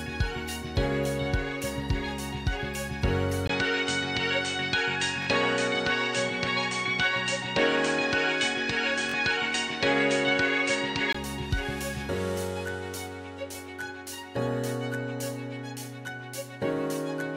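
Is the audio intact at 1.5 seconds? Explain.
Yes, at 1.5 seconds the audio runs continuously, with no dropout, click, distortion or other fault audible at that point.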